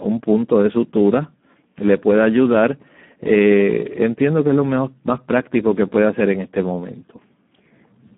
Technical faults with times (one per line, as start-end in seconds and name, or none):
0.00-8.17 Speex codec